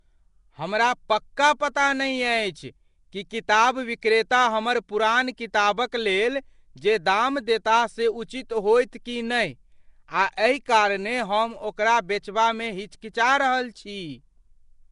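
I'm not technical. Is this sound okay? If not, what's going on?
No. The whole clip has a rough, hissy, underwater sound with nothing above 10.6 kHz, which is likely Nellymoser compression, the old Flash microphone codec, squeezing it hard. Right at 4.01 s there's pre-echo: a brief hiss arrives just before a sharp sound, so that moment comes across soft and smeared.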